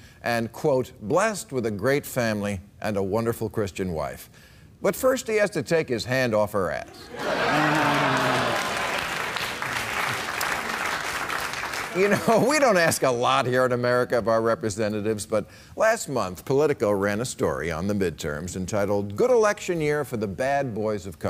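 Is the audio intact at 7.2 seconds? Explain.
Yes, at 7.2 seconds the audio plays through cleanly with no dropout, click, distortion or other fault.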